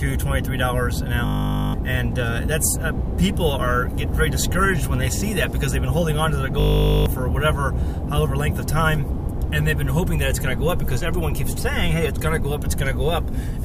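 From 1.26 to 1.74 s, and again from 6.6 to 7.06 s, a system hang loop replays one 20 ms slice of audio about two dozen times. This points to a ring buffer the hardware kept cycling while the system froze. Because the loop is so short, it sounds like a steady 50 Hz buzz, not a stutter, and about half a second of audio goes missing each time. Unlike a dropout, it never falls silent. The same fragment repeats with identical timing.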